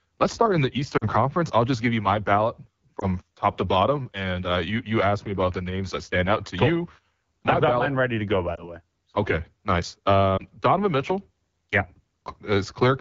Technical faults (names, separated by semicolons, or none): AMR wideband (HD Voice) codec; lost AMR speech frames